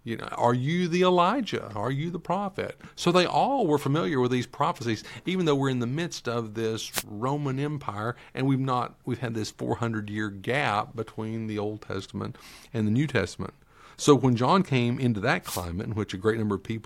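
Short bursts of static swish over the speech from 6.91 to 7.03 s, after "the midst of this", and from 15.42 to 15.66 s, after "came into that". These are wireless microphone noise hits: the FM radio link fades as reflections cancel, and receiver noise rises over the signal.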